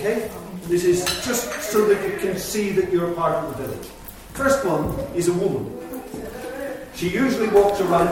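No technical faults are audible anywhere in this recording.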